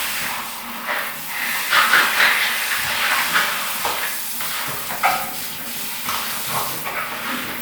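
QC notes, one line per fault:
Nothing stood out as a problem on listening to this audio.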